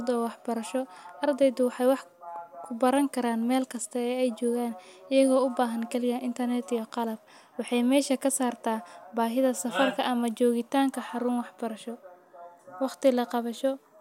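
At 2.96 s, right before "karaan mel kasta ay", there's a sharp little snap sitting on top of the speech, likely an electrical switching spike from something nearby arcing into the line.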